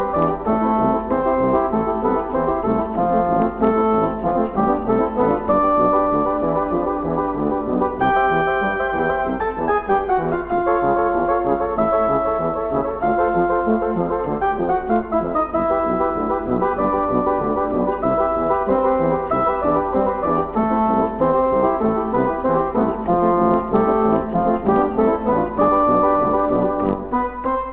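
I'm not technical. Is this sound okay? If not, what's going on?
Yes, it sounds okay; there are no problems to report.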